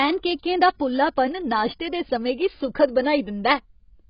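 From start to end the speech is dull and smeared, with nothing above 5.1 kHz and a warbling, fizzy texture on sustained sounds and sibilants. The likely cause is AAC compression, AAC-LC run heavily enough to fit a bitrate around 16 kbps, lowering its cut-off and quantising coarsely. On a spectrogram the energy stops at a flat ceiling near 5.1 kHz, with patchy holes and blotchy noise-filled bands below it.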